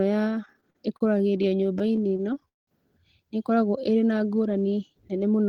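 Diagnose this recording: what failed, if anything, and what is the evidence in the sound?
Network trouble: repeated stalls (stutter) between 0.45 and 2.69 s. The speech drags through 26 short hold-ups, the longest 187 ms, about half a second in total. Late packets kept emptying the jitter buffer, so the receiver stretched the last sound, fading the longer waits, and lost nothing.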